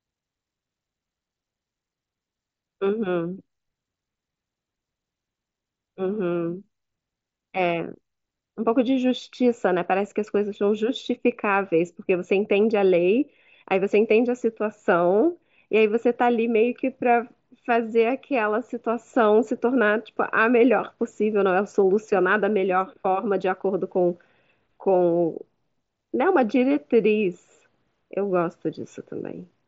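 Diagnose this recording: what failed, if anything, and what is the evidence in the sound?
Nothing failed; no fault is audible in this recording.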